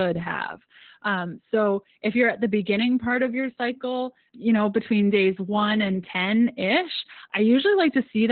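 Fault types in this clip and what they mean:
Opus voice compression: the whole clip goes through Opus's SILK speech coder squeezed into narrowband, so nothing survives above about 4.4 kHz. The speech comes out muffled, hoarse and a bit robotic from coarse excitation coding, which fits a bitrate around 8 kbps.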